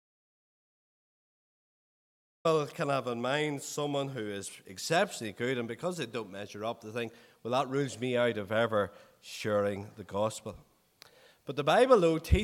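From the very start until 2.45 s there's an audio dropout to silence, no room tone, likely from a lost input feed before the sound finally kicks in.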